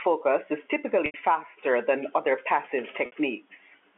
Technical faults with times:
1.06-1.14 packet loss with pitch repetition
3.06-3.12 packet loss with pitch repetition

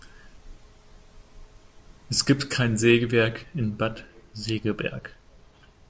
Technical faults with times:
none

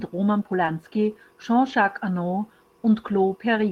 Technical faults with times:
0.65-0.69 short concealed packet loss
0.67-0.69 lost packet rebuilt from error correction
1.69-1.75 lost packet rebuilt from error correction

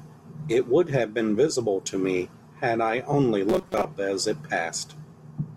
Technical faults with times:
3.49-3.85 robotic sound from repeated short buffers

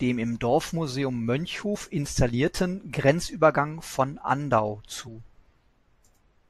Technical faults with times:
1.74-1.77 damaged data in a compressed stream
5.06 damaged data in a compressed stream

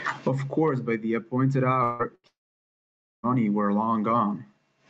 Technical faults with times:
1.83-3.26 long network dropout
2.15-2.26 burst of packet loss

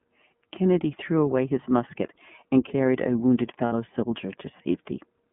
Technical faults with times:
0.00-5.33 iLBC codec
3.66-3.72 lost iLBC frames

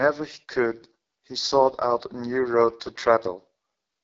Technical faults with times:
0.00-4.03 AMR wideband (HD Voice) codec

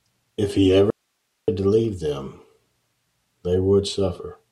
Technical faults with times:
0.90-1.48 audio dropout to a faint residue

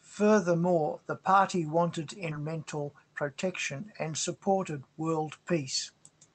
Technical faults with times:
2.31-2.33 skip ahead
2.88-3.30 jitter buffer speed-up

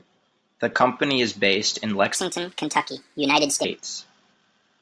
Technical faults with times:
2.15-3.65 wrong sample rate

